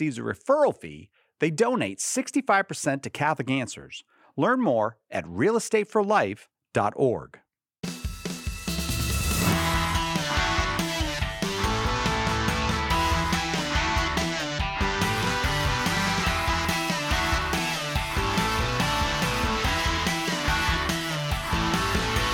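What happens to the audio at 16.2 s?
At 16.22 s there is a dropped buffer (overrun): an abrupt jump in the sound, where roughly 20 ms of audio is missing and the material on either side is spliced together with no gap of silence. The likely cause is the capture software failing to read its buffer in time, so the hardware overwrote those samples before they were collected. The discontinuity at the join is what makes the jump audible.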